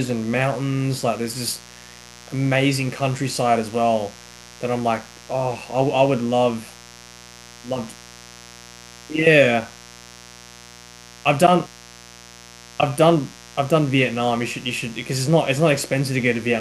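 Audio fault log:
throughout, mains buzz: a steady, raspy buzz sits roughly 25 dB under the speech, built from 60 Hz harmonics reaching kilohertz, as switching spikes leak in twice per mains cycle.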